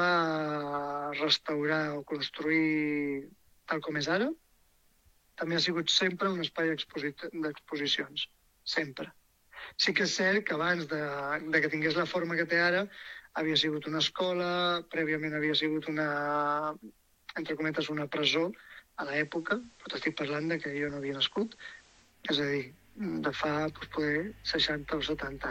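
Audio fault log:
18.97–22.18 s, digital radio blending to analogue: the receiver lost its digital stream and cross-faded over about 190 ms to the same station's FM broadcast, then faded back at 22.18 s. During the FM stretch a hiss floor rises to roughly 30 dB under the programme, and the level drops by about 1 dB. The FM broadcast's own noise and level account for these changes.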